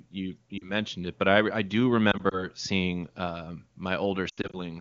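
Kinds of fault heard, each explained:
Lost AMR speech frames: corrupted frames are discarded, and the wideband decoder fills each gap by repeating the last good pitch and vocal tract settings at falling gain. The result is a brief dip at 0.58 to 0.70 s before "it but", scattered warbles from 2.11 to 2.47 s leading into "seeing um", and a longer fade from 4.29 to 4.59 s, where an 80 ms run pulls the sound toward silence.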